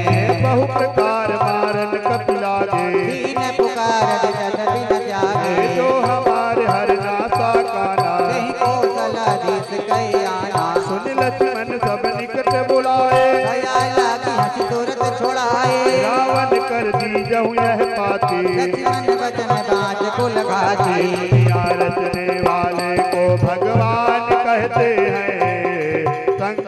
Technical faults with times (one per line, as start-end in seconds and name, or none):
none